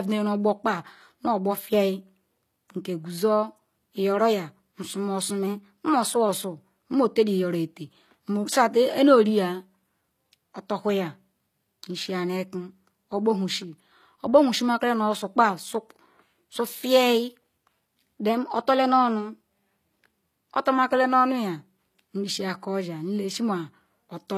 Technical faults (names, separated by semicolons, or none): low-bitrate audio saved at a high bitrate; drift correction step